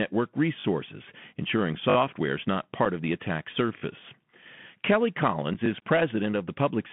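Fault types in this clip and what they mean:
Bluetooth CVSD headset codec: the speech is squeezed into a 150 Hz to 3.4 kHz telephone band, with scratchy s sounds and a granular hiss, grittier than a plain low-pass.
Repeated buffer: a 20 ms piece of sound plays again up to three extra times, heard as a brief stutter or buzz; nothing goes missing, unlike a dropout.
Unconcealed Bluetooth headset packet loss: 7.5 ms holes with abrupt edges, one after "is not"; the sound briefly vanishes instead of repeating.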